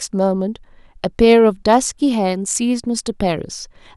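At 1.24 to 1.33 s and again at 1.72 to 1.76 s, the speech shows hard clipping. Its peaks exceed what a stage can pass by about 1 dB and are cut flat. The flattened tops add high harmonics. Each burst is heard as brief crackle.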